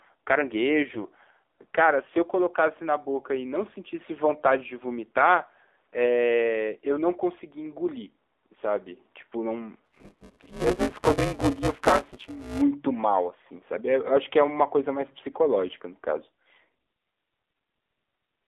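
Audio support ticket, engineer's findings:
Buzzy, synthetic, band-limited speech throughout; nothing below 300 Hz or above 3.6 kHz. AMR narrowband mobile codec (AMR-NB) at 7.4 kbps: low-rate pulse-excited vocal-tract model over 8 kHz sampling, so damage is plainly audible.

Hoarse, scratchy, gargly burst at 0.90–1.10 s; pitch and level roughly held. AMR bit errors: flipped unprotected bits across what sounds like about ten 20 ms frames, at a few percent error rate. Misplaced excitation pulses, skewed gain and spectral values.

Robotic rattle at 188 Hz from 9.84 to 12.62 s, present only while speech plays. Buffer tearing in playback ring buffer, rate fits a 256-sample buffer. Writer and reader pointers crossing each period, with most of each buffer replaced by audio one lap, around 10 ms, older. Hard joins at both edges.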